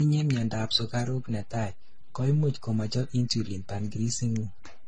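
Transcoding between lossy codecs runs through the whole recording. The speech carries smeared, warbling artefacts from more than one coding stage, and nothing survives above 9.7 kHz, likely a chain from HE-AAC through AAC-LC to a low-rate MP3. A DC step at 0.41 s shifts the waveform's zero line, producing a single low thump. The offset then holds until the end while the speech continues unchanged.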